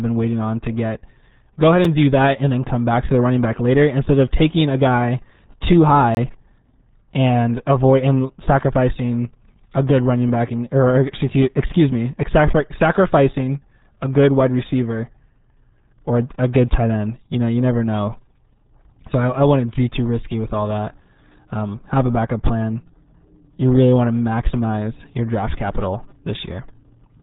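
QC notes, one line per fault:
throughout: RealAudio 14.4 codec. The speech has been squeezed through this 8 kbit/s dial-up-era codec, and heavily: nothing above about 3.8 kHz survives, so sibilants and consonant edges are gone and the voice sounds muffled. What separates this from a simple low-pass filter or telephone band-limiting is the gargly, bubbling texture inside the remaining band. The coder rebuilds the speech from a very coarse model, and that texture is the modelling error.
1.85 s and 6.15–6.17 s: block of digital silence. The audio drops to silence and returns with no fade. The first hole lasts about 6 ms and is heard as a single tick. The second lasts about 23 ms and comes across as a brief dropout. Their lengths point to blocks of 256 and 1024 samples, which fits output buffers that were not filled in time rather than packet loss or a codec artefact.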